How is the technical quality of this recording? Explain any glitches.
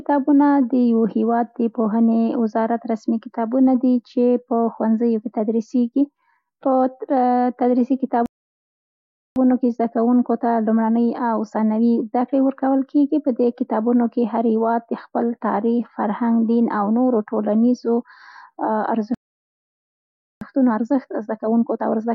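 The recording has two playback stalls, each followed by a time-compressed catch-up.

Playback stall, at 8.26 to 9.36 s and 19.14 to 20.41 s: the player likely ran short of data or had its thread blocked, so output stopped. The speech cuts out mid-flow into silence, for about 1.1 s and then about 1.27 s, before resuming.

Time-compressed catch-up, at 9.36 to 12.36 s and from 20.41 s to the end: to work off the backlog, the player trims tiny slices and cross-fades the joins. The speech sounds hurried, 1.1 times and then 1.15 times normal speed, at unchanged pitch.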